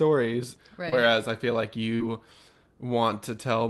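Speech clip with two short concealed packet losses, at 0.89 to 0.94 s and 1.96 to 2.01 s, where about 20 ms and 40 ms of audio never arrived and the decoder extended the preceding sound to bridge them. Unlike a plain dropout, there's no silent gap, just a brief smear before the real signal resumes.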